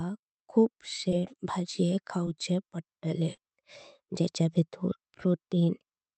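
At 1.09–1.21 s, 2.25–2.28 s and 3.34–3.41 s, short concealed packet loss: lost stretches of 20–40 ms were filled by extrapolating the speech, giving brief smears rather than silent dropouts.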